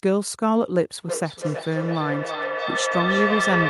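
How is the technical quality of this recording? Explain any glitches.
The recording has one serious fault. From 1.04 s to the end, feedback echo between two devices is audible. A second device replays this microphone's sound, and the microphone captures it again. Each phrase returns roughly every 300 ms, peaking at about 1 dB below the speech.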